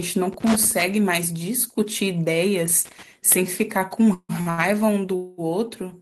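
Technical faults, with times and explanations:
0.33 to 0.82 s and 2.85 to 3.03 s, loose connector crackle. Two irregular bursts of crackle and scratching cut through the speech. The first lasts about half a second, the second under 0.2 s. A worn or dirty contact is making and breaking as it moves. Each break chops the signal off for an instant. Any DC on the line turns those breaks into small pops. Together they sound like rough scratching.
4.13 to 4.31 s and 5.16 to 5.40 s, call audio freeze. The speech stops advancing, and the last sound is drawn out as a fading buzz. In the first freeze, 155 ms is filled, and the last 50 ms of that is silent. In the second freeze, 220 ms is filled with no silent stretch. The speech then carries on from the same point, so nothing is lost. It is simply running later by those amounts. The likely cause is packets held up in transit, which left the jitter buffer empty.
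4.41 to 4.48 s and 4.50 to 4.60 s, short stall from a late packet. Just after the first freeze, the speech catches twice more. A sound is held too long, first for 52 ms and then for 78 ms, with a slight buzz or dip. A packet had not arrived when it was due. The receiver stretched the last sound to cover the wait, then resumed where it left off. Nothing is missing, but each hold adds delay.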